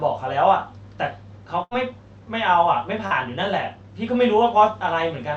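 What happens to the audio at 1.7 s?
At about 1.63 to 1.74 s there is a burst of packet loss. A run of audio never arrived in time, so the receiver stretched the last sound it had across roughly 75 ms, fading it as it went, which turns into a held buzz or fading hiss. Playback then picks up about 80 ms further on, skipping that stretch. Unlike a simple dropout to silence or a click, the gap is filled with a smeared, decaying copy of what came just before.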